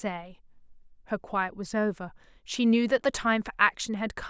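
No technical faults can be heard anywhere in this recording.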